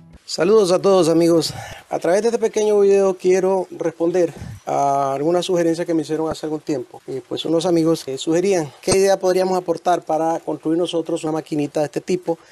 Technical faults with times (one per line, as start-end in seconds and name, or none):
1.70-1.73 damaged data in a compressed stream
6.31 damaged data in a compressed stream
8.91-8.94 damaged data in a compressed stream
11.24-11.27 damaged data in a compressed stream